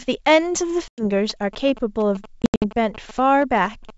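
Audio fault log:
0.88–1.03 s and 2.42–2.65 s, packet loss on an ADPCM call: a clean 100 ms silent hole, then 160 ms lost in pieces across 200 ms with runs up to 80 ms, each gap fitting a handful of packets. Speech resumes slightly distorted while the decoder's predictor and step size resync, which a simple dropout would not cause.
1.30–3.91 s, GSM signalling bursts: a galloping dit-dit-dit of short 217 Hz buzzes, about 15 dB below the speech, from a nearby 2G phone's signalling bursts rectified by the audio circuit. Unlike steady mains hum, it comes in gated clusters that ignore the speech, and it sits over the otherwise clear G.722 wideband band.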